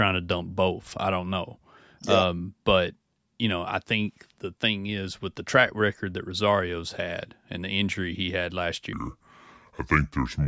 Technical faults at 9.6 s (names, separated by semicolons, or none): wrong sample rate